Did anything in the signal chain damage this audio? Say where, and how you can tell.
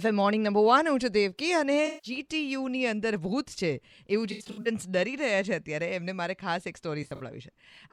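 Yes. AAC frame loss with concealment, codec stage. Smeared, phasey patches at 1.86–2.11, 4.31–4.67 and 7.02–7.20 s. Decoder refilled gaps from the last good spectrum.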